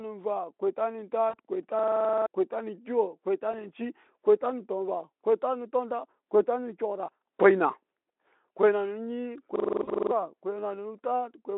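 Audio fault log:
1.29–1.35 s, 3.52–3.54 s and 9.83–9.90 s, VoIP packet loss concealed by the speech codec: one or two 20 ms frames went missing, and the decoder filled each gap by extending the last pitch and filter at falling gain. The speech briefly turns into a buzzy tone or a fading coloured noise, then needs a few tens of milliseconds to recover.
1.79–2.26 s and 9.56–10.11 s, system hang loop: the machine stalled while the sound hardware kept replaying one 42.67 ms buffer, which fits 2048 samples at 48 kHz, 11 and then 13 times. The result is a machine-gun stutter at 23.4 Hz, and roughly half a second of speech is lost each time.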